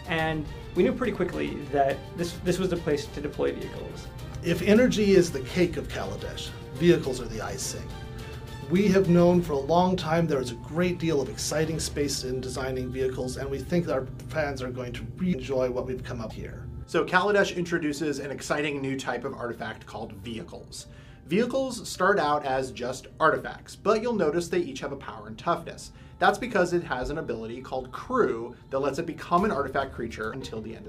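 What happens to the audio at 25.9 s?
Nothing goes wrong at 25.9 s; the audio plays through that moment intact, with no dropout, click, glitch or other fault.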